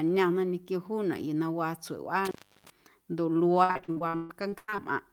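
At 2.25 s, just after "yuu na waa", there is an intermittent contact fault. A loose plug or cable briefly breaks the connection. The speech drops out for about 330 ms with crackle at each edge. Faint hiss remains until it returns at 2.70 s.

From 3.63 s to 4.80 s comes repeated packet loss, heard as robotic sound. Thirteen gaps follow one another closely. Each is filled by stretching the last sound, so about half the span is concealed. The longest gap is 133 ms. The speech turns choppy.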